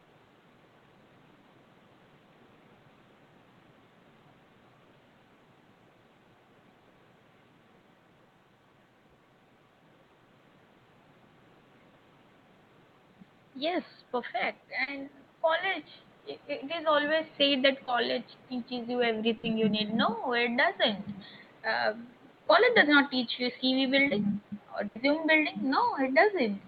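At 14.83 to 14.89 s there is short concealed packet loss. It happens again at 17.85 to 17.89 s, just after "always said that". Audio failed to reach the decoder in time. The receiver continued the last sound to fill 40 ms, then 20 ms. Each gap is heard as a brief smear.

A burst of packet loss follows at 19.37 to 19.45 s, between "teaches you" and "you need". Another occurs at 24.87 to 24.97 s. Here 60 ms, then 80 ms, never arrived. The held sound fades out. The audio then resumes further on, with that stretch missing. Room noise sits about 31 dB below the speech.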